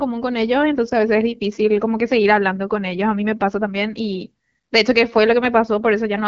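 The speech comes through an AMR wideband (HD Voice) path at 12.65 kbit/s, with nothing above 7.5 kHz and only the light coding character that rate brings, and no technical fault is present.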